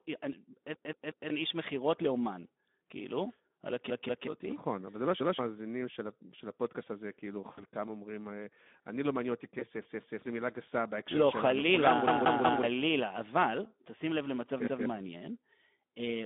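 Throughout the clip, the speech is narrowed to roughly 200 Hz to 3.6 kHz and is hoarse and noisy. This is Speex codec damage at about 11 kbps. The roughness comes from too few bits for the excitation, not from added background noise.

From 0.74 to 1.30 s, a repeated buffer plays the same segment of about 186 ms four times in total, which fits an 8192-sample buffer. Each repeat joins on with a hard edge and roughly half a second of speech is lost. The identical copies make it a stutter, not a fade. The same fault returns from 3.90 to 4.27 s and from 9.85 to 10.22 s, each time with two extra plays and around 0.4 s lost.

From 7.51 to 7.63 s, VoIP packet loss concealed by the speech codec fills a 60 ms gap with a buzzy tone or coloured noise that fades. It fills a 20 ms gap the same way from 9.59 to 9.66 s. Unlike a repeat, this sound is extrapolated and decays, with no hard join.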